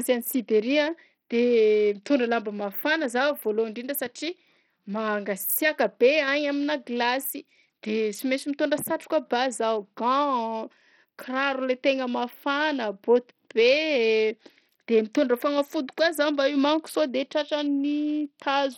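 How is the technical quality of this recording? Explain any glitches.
The recording is heavily degraded by codec damage throughout. From start to finish the speech bears the marks of Bluetooth SBC compression, likely squeezed through a starved bit budget that fits roughly 64 kbps. The upper sub-bands get too few bits, so the treble flickers in and out, while coarse quantisation leaves gritty noise and aliasing riding on the speech.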